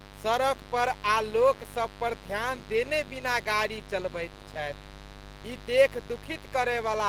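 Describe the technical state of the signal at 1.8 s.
Mains buzz runs through 1.8 s, as it does across the whole clip. Sharp switching spikes from something like a dimmer, a rectifier or an unshielded lead ride on the 50 Hz supply and recur twice per cycle, so the interference carries a dense ladder of 50 Hz harmonics reaching up into the kilohertz range. At 1.8 s it sits at roughly 15 dB below the speech and is heard as a steady, raspy buzz under it.

Opus compression damage is also present at 1.8 s and plainly audible. The speech sounds muffled and hoarse, with a rough, grainy texture rather than the swirling of MP3. That character points to the encoder's hybrid mode, likely at a low rate around 16 kbps, where too few bits force parts of the spectrum to be rebuilt by folding or filling with noise. Content still reaches up to about 20 kHz, so the coding is fullband even at this rate.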